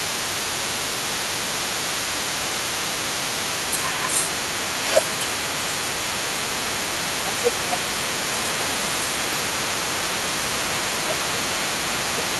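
From 0.0 s to the clip's end at 12.39 s, the other side's voice leaks through about 10 dB below the talker. Likely residual loudspeaker echo that the canceller missed, it forms a second voice and appears on a spectrogram as weaker, overlapping harmonics throughout.

Speech is suppressed in double talk at 5.63–6.44 s, 7.21–8.86 s, 9.69–11.44 s and 12.14–12.35 s. The canceller likely treated the talker as echo while both spoke, ducking the voice by around 10 dB in patches. The waveform envelope dips and spectrogram energy thins.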